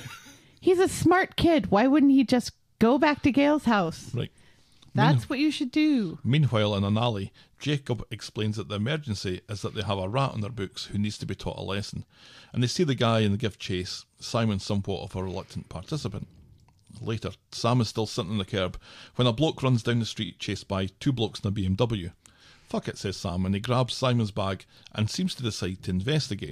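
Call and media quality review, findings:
Repeated frames, 20.25–20.30 s, after "bloke runs down the", before "chased by two blokes": 23.2 ms block replayed twice, single compressed frame, adding 46.4 ms. Write/transport duplication. Spectrogram: identical adjacent slices; waveform: copied segment.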